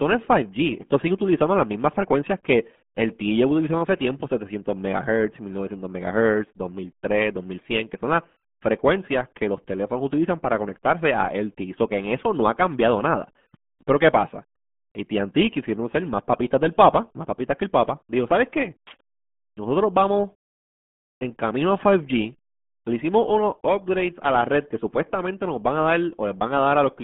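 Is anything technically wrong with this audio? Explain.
Yes. Throughout, it's RealAudio 14.4 codec damage: the sound fits a roughly 8 kbit/s dial-up speech coder, squeezed into about 150 Hz to 3.4 kHz with nothing above 3.8 kHz, so it's muffled and gargly.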